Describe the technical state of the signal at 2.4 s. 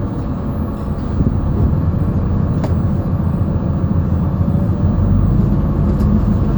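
At 2.4 s the signal is intact, with no audible technical fault at that moment.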